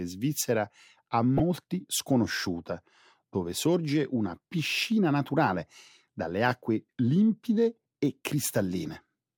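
Between 1.37 and 1.40 s, after "svizzera a" and before "sconosciuta dove sorge una", a brief blip of noise breaks into the speech. This is DAB burbling: weak reception let bit errors slip past error correction into the MP2 data, corrupting samples within individual sub-bands.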